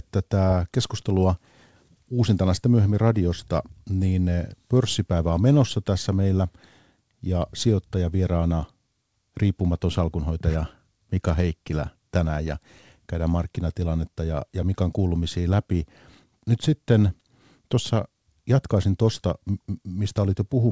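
Nothing stood out on listening to this speech, which carries the expected band limit of a G.722 call path with no content above about 8 kHz.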